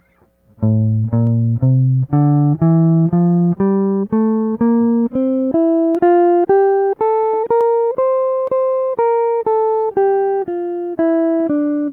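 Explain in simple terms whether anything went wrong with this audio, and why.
Four short, sharp clicks cut through the music at 1.27, 5.95, 7.61 and 8.47 seconds. Each is a single tick with no missing sound around it. These are most likely dropped samples. A tiny sliver of the audio, far less than a thousandth of a second, went missing, so the sound jumps abruptly from one point to a slightly later one. That sudden step is what you hear as a click.

At about 5.51 seconds the music jumps forward, with the join finishing by 5.53 seconds. There is no silence or filler at the join. Roughly three quarters of a second of music is simply missing, and the parts before and after are stitched straight together. This is a skip ahead. A chunk of audio was discarded while later audio was already queued up, so playback leapt past it.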